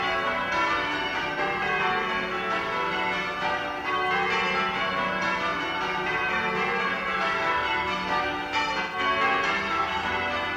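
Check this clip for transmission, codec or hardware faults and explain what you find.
There are two dropouts from AAC frame loss with concealment, at 1.33–1.38 s (about 43 ms, roughly one frame) and 8.80–8.99 s (128 ms, roughly three frames). Each time, the decoder patches over the gap from the last good spectrum, so you hear a brief smeared, noisy smudge instead of a clean cut.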